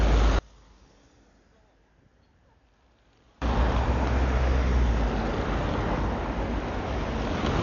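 The clip is an everyday sound recording. Throughout, it is dull and band-limited, with nothing above 7 kHz. Heavy rough, fluttering noise surrounds tonal parts. This is likely Dolby Digital compression at a low rate, around 48 kbps. Starved frequency lines are filled with dither noise. From 0.39 to 3.42 s, the mono sum drops by about 32 dB. Common content cancels, leaving only a faint difference signal. The likely cause is one channel inverted, with reversed polarity on that stereo side.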